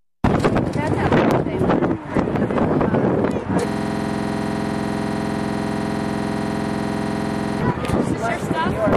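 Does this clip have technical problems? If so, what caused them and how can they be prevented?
Yes. From 3.69 s to 7.61 s there is a system hang loop. The same 46.44 ms fragment repeats back to back, roughly eighty times, giving a rapid, buzzy stutter at 21.5 Hz. That loop length fits a 2048-sample ring buffer that the audio hardware kept replaying after the host or driver stopped refilling it. To prevent it, use stable drivers, avoid CPU or I/O stalls during capture, and enable a watchdog that mutes output on buffer underrun.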